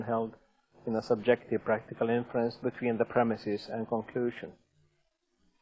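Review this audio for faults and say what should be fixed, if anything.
Nothing stood out on listening, so there is nothing here that needs fixing.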